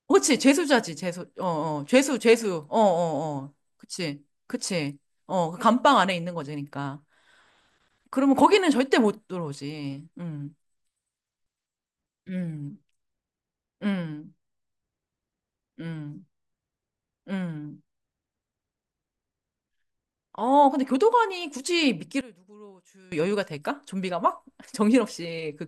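From 22.21 to 23.12 s the speech drops by about 21 dB, which points to one channel inverted, likely, cancelling the centred voice on mono summing. Unlike a plain level dip, a faint residue remains.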